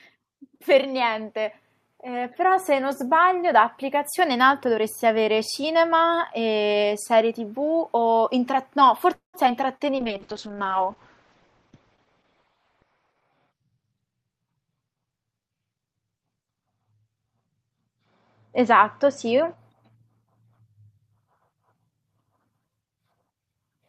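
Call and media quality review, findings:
Automatic gain rising, 0.85–3.09 s. Speech and background swell together by about 6 dB over roughly two seconds. Component: AGC. The input was judged too quiet, so gain was ramped up gradually. The noise floor rises with the speech because the whole signal is scaled, not just the voice.

Call audio freeze, 9.13–9.36 s. Last sound is held as a fading buzz, then about 130 ms of silence, about 200 ms of inserted time in total. Likely cause: delayed packets draining the jitter buffer. Playback resumes where it stopped, so nothing is missing, but latency grows by about 200 ms.

Short concealed packet loss, 9.46–9.48 s. Brief smear just after the freeze. Component: decoder packet loss concealment. About 40 ms of audio never arrived in time. Only about 8 ms was synthesised from the preceding sound before blending back, so part of the speech is dropped and delay shortens by roughly 30 ms.

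Call bitrate drop, 9.97–19.64 s. Speech turns rough and muffled. Component: Opus encoder under congestion control. Bandwidth estimate fell, and the bitrate was cut from 64 kbps to 8 kbps, bottoming out for about 3.3 s. Audio bandwidth narrows from 20 kHz to 6 kHz, removing sibilance and air until the rate recovers.

Jitter buffer speed-up, 13.24–14.62 s. Speech sounds hurried, at about 113% speed with pitch unchanged. Component: jitter buffer time-scale modification. The buffer held excess audio, so short pitch-period segments were cut repeatedly, roughly 0.2 s in total, to pull latency back to target.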